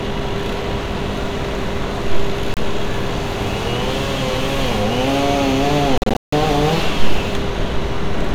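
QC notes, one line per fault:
2.54–2.57 s, Bluetooth dropout: a 29 ms hole of silence, which fits a couple of packets failing to reach the headphones in time, likely over a weak wireless link. Unlike an edit cut, no time is skipped: the sound comes back exactly where it would have been had it kept playing.
5.98–6.33 s, Bluetooth dropout: about 261 ms of silence broken into pieces across 348 ms, the longest single gap 160 ms. The stuttering on-off pattern points to a likely burst of lost packets, not one stall. There is no concealment fill or smearing across the gaps, which sets it apart from codec packet-loss repair.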